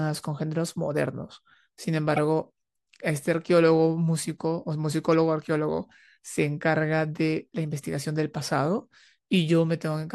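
At 2.16 to 2.19 s, and again at 5.11 to 5.14 s, a corrupt frame was decoded. In each case a single compressed frame carried flipped bits, and the decoder played it with wrong gains or misread codes, scattering energy to the wrong frequencies for about 25 ms. The first is a fairly loud glitch. The second is the same kind of glitch but much fainter. A dropout would leave a gap, and a click would be instantaneous, but each of these is a short burst lasting one frame.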